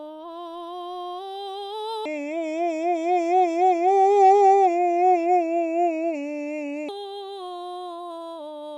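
From 2.06 s to 6.89 s the music turns slow and heavy, its pitch sinking roughly seven semitones before snapping back. This section at the wrong speed plays at 0.663 times its proper rate, likely because it was reproduced against the wrong clock.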